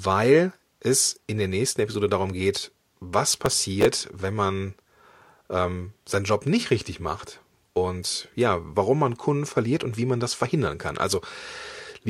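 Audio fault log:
3.33–3.98 s, processor overload crackle: a gritty burst of crackle rides on the speech just before "wenn man". The processor repeatedly failed to fill its buffers in time, roughly ten misses of about 5 ms each, and every miss replayed a scrap of old audio with hard edges, producing the tearing texture until the load eased.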